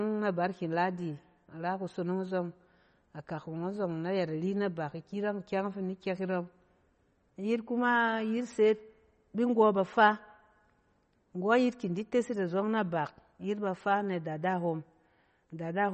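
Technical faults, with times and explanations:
Throughout, MP3 compression: the audio is band-limited with nothing above 8.4 kHz, and the speech carries a plainly audible watery, swirling texture. This is likely a low-bitrate MP3 encode, which fits a rate near 32 kbps. Short of bits, the encoder drops the treble at a fixed cutoff and discards weak frequency lines that then switch on and off between frames, so the sound shimmers and sibilants turn chirpy and metallic.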